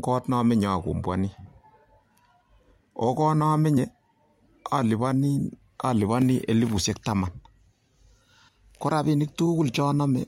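At 0.88 s, again from 3.74 to 3.78 s, and from 9.43 to 9.47 s, the speech jumps ahead by about 20 ms each time, the sign of compressed frames skipped: whole coded frames never reached the output, so the decoder moved straight on to later audio. Unlike a dropout, no silent gap opens.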